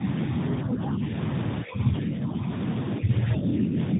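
A speech recording that crossed a tandem speech coding chain, decoded and re-encoded at each network border. The sound points to an AMR-NB narrowband stage followed later by a CVSD stage, with each coder working on the previous one's damage. Nothing remains above 3.8 kHz, so the speech is muffled, and it is rough and warbly throughout. At the very end, from 3.95 s to the close at about 4 s, an echo canceller likely misjudged double talk and turned the talker down. The speech dips by about 5 dB for a brief stretch of around 50 ms.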